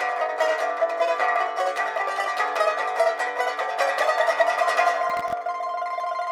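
At 5.09 s a burst of processor overload crackle begins and runs to about 5.33 s, roughly a quarter of a second. The processor repeatedly failed to finish tiny buffers, each under a millisecond, in time, and around fifteen of those deadlines were missed, each leaving a brief hole of silence with abrupt edges. The result is a gritty tearing over the sound. On the waveform it shows as a cluster of brief dropouts. On the spectrogram the same stretch shows as thin vertical broadband streaks.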